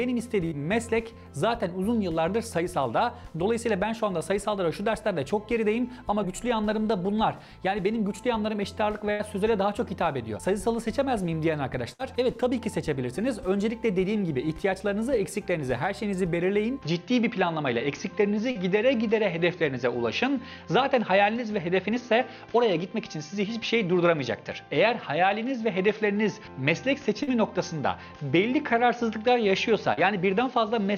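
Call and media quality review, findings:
Burst of packet loss at 0.45–0.53 s, 9.11–9.21 s, 11.93–12.01 s: held, fading continuation of 60–80 ms, then resumption further on with that stretch missing. Network jitter buffer and decoder concealment.

Input switched to a poorer device at 16.82 s, through end: abrupt dulling, nothing above 6.6 kHz, new noise floor about 45 dB down, no level jump, no gap. Likely capture-device or headset-profile change.

Short concealed packet loss at 18.51–18.57 s, 27.23–27.29 s, 29.93–29.99 s: brief 40 ms smears where the decoder extrapolated the preceding sound, then blended back into the received audio.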